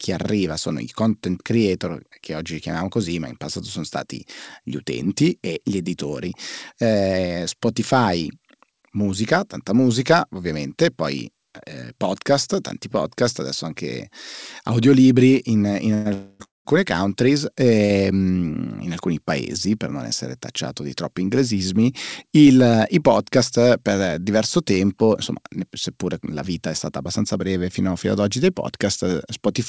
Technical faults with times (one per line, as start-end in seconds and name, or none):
15.94-16.67 call audio freeze
17.85-17.92 short stall from a late packet
26.92-27.38 jitter buffer speed-up